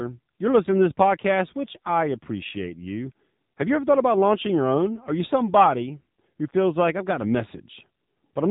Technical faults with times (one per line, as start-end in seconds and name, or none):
0.00-8.51 AMR narrowband mobile codec